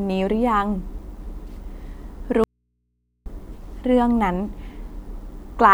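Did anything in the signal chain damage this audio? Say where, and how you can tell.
Yes: an audio dropout to a faint residue runs from 2.44 s to 3.26 s, cutting the speech abruptly for about 0.82 s. The gap isn't silent. It holds only mains hum, sitting around 50 dB below the normal speech level, before the speech snaps back just as suddenly. Hum filling the break, rather than digital silence, points to the analogue wiring, likely a connection that briefly opened and left the input floating while the rest of the path stayed live.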